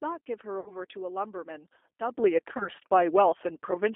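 Throughout, the speech carries the sound of the G.729 codec at 8 kbit/s. The line band runs from roughly 300 Hz to 3.5 kHz, so the audio is thin and boxy with no top end. Because the decoder rebuilds each frame from a vocal tract model and a few excitation pulses, the voice comes out plainly rough and slightly synthetic.

From 0.60 to 0.74 s there is VoIP packet loss concealed by the speech codec. About 60 ms of signal is missing, which fits two lost packets. The decoder fills the gap by repeating its last pitch period and filter shape at falling gain, so the sound is stretched out and fades. The voice stays weak and slightly distorted for a moment after real data returns.

At 2.14 s a sudden gain jump lifts speech and background together by about 10 dB, and the higher level holds to the end. The step is instantaneous, most likely a level change applied in one sample with no ramp.

From 2.57 to 2.69 s, within that louder stretch, the packet loss concealment shows again. 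About 30 ms is missing, which fits a single lost packet. It produces the same brief stretched, fading extension, and the speech takes a little time to recover its proper shape.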